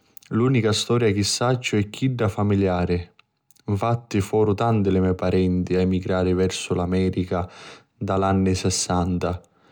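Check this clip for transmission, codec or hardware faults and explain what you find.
Nothing turns up here to point to a transmission, codec or hardware problem; the speech comes across steady and unbroken all the way through.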